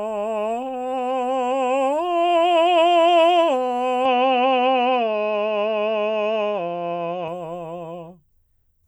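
At 4.05 s the music abruptly loses its top end, with nothing left above about 6.7 kHz, and it stays dull and boxy until 7.28 s, when the full bandwidth returns. This is likely an input switched to a poorer device. There is no gap at either switch. Unlike a plain low-pass filter or codec bandwidth drop, the level shifts by about 5 dB and a new, faint noise floor appears, roughly 55 dB down.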